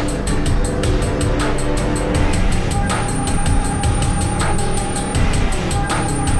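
No technical faults can be heard anywhere in the audio; the signal stays continuous and stable throughout.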